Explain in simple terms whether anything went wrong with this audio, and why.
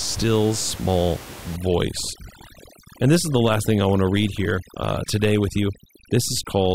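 From about 1.56 s to the end, there's overdone noise removal: the cleanup chews into the quiet room noise, leaving twinkly near-silence, and takes quiet parts of the speech with it.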